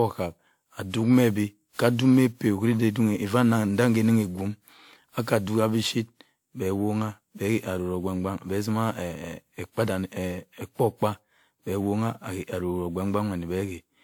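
From start to finish the speech carries a swirling, hollow smear, and consonant attacks sound softened. This is generation loss: the audio was likely decoded and re-encoded around seven times, with each pass quantising on a shifted frame grid so that errors pile up. The character points to a WMA-style codec at around 128 kbit/s. On a spectrogram, content stops near 20.1 kHz. In the waveform, transients look rounded.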